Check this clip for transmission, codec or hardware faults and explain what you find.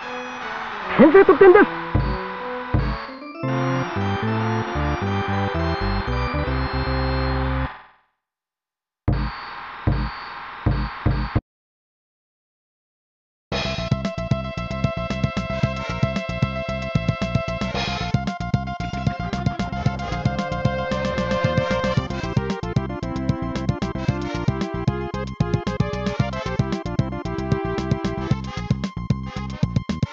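No transmission, codec or hardware faults can be heard anywhere in this clip.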